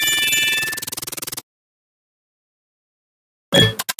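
From start to finish, a noise suppressor built for speech is working on this sound and treating its steady parts as noise. Sudden onsets pass largely intact, but sustained energy and decaying tails are pulled down, with the gain swinging by around 5 dB. It pumps and flutters, and tails thin out early. On a waveform the envelope ripples where it should be smooth. A spectrogram shows held bands blotchy and tails cut short.

Between 1.11 and 1.41 s comes a sharper instance, where the sound is cut by the noise suppressor more than anywhere else, for roughly a fifth of a second of that span. The suppressor takes this stretch for noise and turns it down by about 7 dB at its deepest, so the sound briefly sinks and its decay dies away too soon. The waveform shows a clear dip in amplitude, and the spectrogram a darker, hollowed patch.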